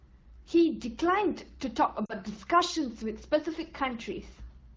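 A speech clip carried over an AMR wideband (HD Voice) link, with lost AMR speech frames from 2.05 to 2.13 s. For about 40 ms the sound smears and dips. This fits two lost 20 ms frames, which the decoder concealed by repeating the last good frame at falling gain.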